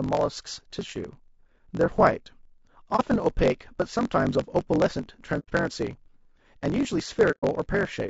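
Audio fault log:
Throughout, block size mismatch (truncated): there's a steady buzz at about 46.9 Hz under the speech, and everything runs about 1.12 times fast while the pitch stays roughly where it should be. One stage hands over longer blocks than the next one reads, so the tail of every block gets dropped. That fits a 1024-sample read, and the regular chop at the block rate is what you hear as the buzz.
Throughout, low-delay AAC compression: the speech sounds rough and grainy, with a noisy fizz sitting between the harmonics and a top end that feels thin or a bit synthetic. The damage is plainly audible. The likely cause is AAC-ELD, the low-delay AAC used in video calls, at a bitrate around 32 kbps. Its very short frames can't resolve pitch harmonics well, and at that rate there aren't enough bits to cover the gaps.
2.96 to 3.00 s, 5.39 to 5.50 s, and 7.31 to 7.44 s, AAC frame loss with muting: the sound fades out and back in, leaving soft-edged holes of about 30, 90 and 120 ms. 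That's one, three and four frames' worth. The decoder zeroed the spectrum of the missing frames, and the overlapping windows on either side smear the edges, so you get a gentle dip rather than a hard cut.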